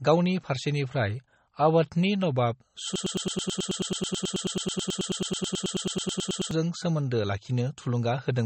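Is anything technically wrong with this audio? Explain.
Yes, there are two faults. Throughout the speech, the sound has plainly audible MP3 compression artefacts. Nothing is heard above 8.3 kHz, so sibilants sound dull. Weak frequency components flicker between frames and give a watery, swirly texture. This is likely a starved encoder, which fits a low bitrate around 32 kbps.

From 2.96 s to 6.51 s there is a broken-record loop. A fragment of about 108 ms repeats exactly, back to back, more than thirty times. This is likely a stalled player or stream resending its last buffer. The speech that belonged there is lost.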